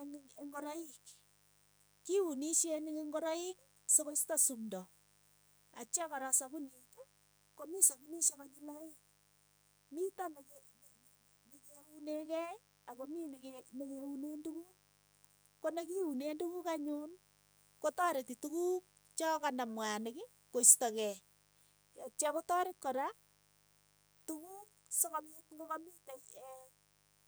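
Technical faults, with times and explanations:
Throughout: mains buzz, a raspy 50 Hz buzz about 35 dB below the speech; switching spikes add harmonics into the kilohertz range, unlike a smooth low hum.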